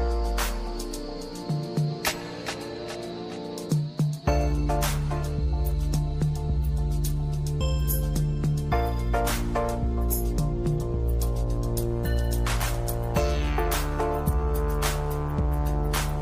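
Nothing in the audio stands out as a technical fault; it just runs along with no glitches to point to at any moment.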